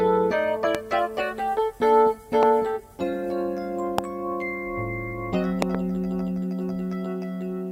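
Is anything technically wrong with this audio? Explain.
Yes, there are loud pops at 0.75 to 0.77 s, 2.43 to 2.45 s, 3.98 to 4.01 s, and a double pop at 5.62 to 5.77 s, each peaking about 20 dB above the sound. They were likely caused by voltage pulses from a switch, plug or static. Unlike dropouts, the sound continues unbroken beneath each thump.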